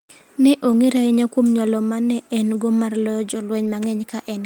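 At 0.71–0.73 s, just before "ahinya kuom nyalo ma", and again at 3.65–3.67 s, right after "en go mar loyo", a packet was lost and rebuilt from error correction. The decoder filled each 20 ms span from a low-bitrate copy, so there is no gap, only a brief rough, noisy patch.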